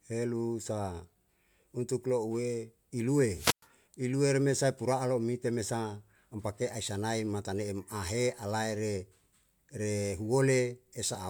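Speech, with hiss rising briefly at 3.32 s before the sound drops into a near-silent hole of about 106 ms and recovers by 3.67 s. This is a wireless microphone squelch dropout: the FM radio signal faded, and the receiver's squelch muted the output.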